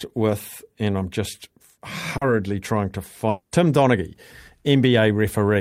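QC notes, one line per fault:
2.17 to 2.23 s, short concealed packet loss: just before "trying to", about 40 ms of the speech failed to reach the decoder in time, and the receiver filled the gap by extending the preceding sound, carrying on its pitch or as shaped noise, then crossfading back into the real signal. This is heard as a brief smear in the speech. On a spectrogram the harmonics or noise texture stretch on unnaturally, and the waveform shows a short, regular-looking patch.
3.29 to 3.53 s, long network dropout: right after "trying to", about 220 ms of audio is missing, most likely because the network stopped delivering packets. The receiver stretched the last sound into a fading synthetic tail, ending in about 10 ms of silence before the speech returns, with the missing section gone. A spectrogram shows a smooth decaying band with no new onsets, and the waveform shows a tapering envelope, a flat gap, and then a sudden restart.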